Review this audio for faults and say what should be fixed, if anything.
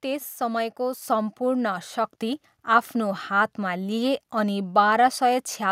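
The speech and the background jump louder together in two abrupt steps, at 1.02 s by about 4 dB and at 2.04 s by about 3 dB. This is microphone volume stepped up: the call software judged the input too quiet and raised the device's input gain in single steps. To prevent it, disable automatic microphone gain adjustment and set a fixed input level before the call.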